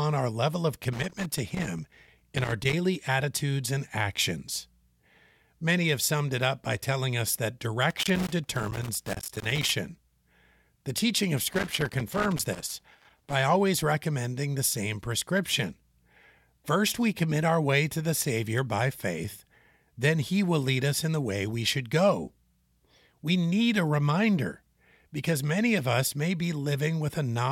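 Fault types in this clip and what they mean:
Loose connector crackle: at 0.93–2.73, 7.90–9.70 and 11.53–13.33 s, a worn contact intermittently breaks the line, chopping the speech into irregular 1.8-second bursts of scratchy crackle.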